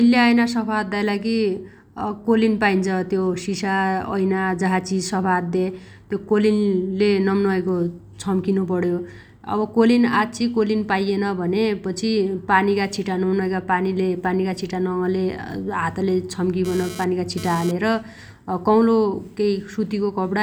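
From 16.65 to 17.71 s there's GSM phone buzz: a nearby 2G phone's 217 Hz bursts get rectified into a raspy buzz about 15 dB under the speech.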